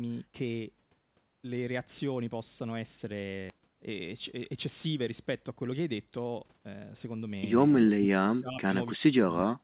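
Right at 3.50 to 3.52 s there's a skip ahead: something like seven tenths of a second of speech just never arrives, and playback jumps straight to later audio with no fill, so the two sides butt together almost seamlessly.

Then the jitter buffer speed-up kicks in, first from 3.59 to 3.91 s at about 111% speed, then from 4.37 to 7.65 s at about 108%. The buffer was holding too much, so it trimmed tiny pitch-period chunks over and over. The pitch stays put but the talker sounds a bit rushed.

Finally, from 7.89 to 8.74 s, briefly around 8.98 to 9.02 s, and again from 9.22 to 9.63 s, the speech gets chopped down. The long stretches dip very deep and the short one only slightly. That's likely speech suppressed in double talk, with the echo canceller ducking everything while both ends talked. All of this sits on a narrowband call path with nothing above 4 kHz, which fits a G.711-style codec.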